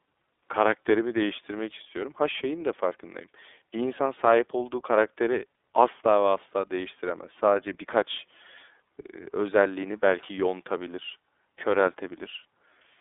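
Right through the speech you can hear the iLBC codec at work. Nothing gets above about 3.8 kHz, the line band sits around 250 Hz to 3.6 kHz, and each 30 ms frame coded on its own leaves a plainly rough, synthetic edge, which fits the 13.33 kbps mode.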